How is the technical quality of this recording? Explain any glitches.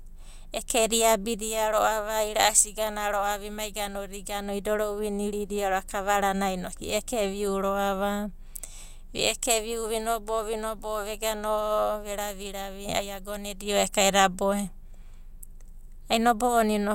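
The recording has one clear fault, a burst of mains hum from 5.76 to 8.23 s. A ground loop or nearby transformer let the 60 Hz power line couple into the signal, adding a steady low drone with some low harmonics, roughly 30 dB below the speech.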